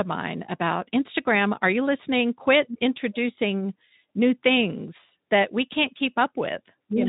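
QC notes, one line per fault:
No faults to note.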